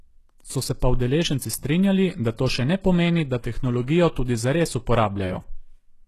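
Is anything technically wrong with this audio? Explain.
Yes. Throughout, likely HE-AAC compression at a rate that sounds near 16 kbps rebuilds the treble by copying lower bands upward, leaving gritty, metallic s sounds and nothing above 12.3 kHz.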